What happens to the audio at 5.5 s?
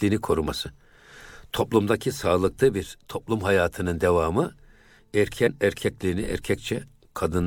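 Several compressed frames never reach the output at 5.46 to 5.48 s. They are either missing from the stream or rejected by the decoder as corrupt, so compressed frames are skipped. With frames about 23.2 ms long, the gap fits roughly four of them, and the speech lurches forward by about a tenth of a second.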